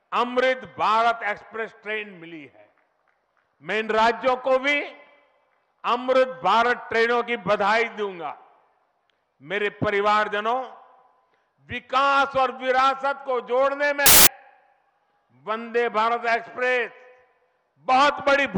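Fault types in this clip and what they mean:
Samples built from the wrong bytes: from 14.06 to 14.27 s the sound turns into loud, harsh broadband noise for about 0.2 s. For that stretch each sample's bytes were put together in the wrong order or alignment, so the rapidly changing low bits ended up as the large part of each value. Ordinary clipping or crackle keeps the underlying sound recognisable. Here it is replaced by harsh broadband noise.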